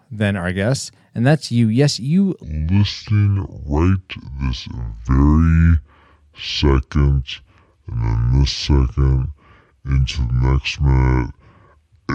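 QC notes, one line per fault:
2.43 s to end, section at the wrong speed: speech plays at 0.596x, about ten semitones deeper, likely from a clock mismatch. Tempo slows along with pitch, unlike a pitch shift.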